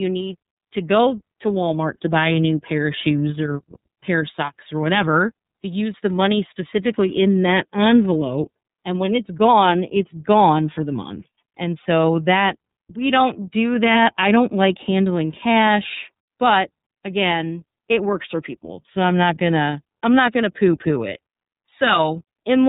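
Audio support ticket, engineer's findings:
Speech path encoded with iLBC narrowband codec, whole clip. Each frame's excitation coded independently, with roughness and grain that fit 30 ms frames at about 13 kbps. Nothing above 4 kHz passes: muffled, band-limited voice, plainly audible synthetic rasp throughout.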